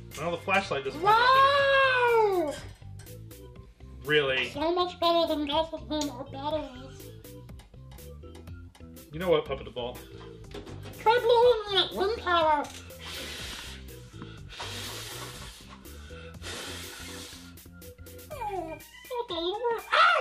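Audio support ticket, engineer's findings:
No audible fault found across the clip; nothing to trace to any component, ticket can be closed as no defect reproduced.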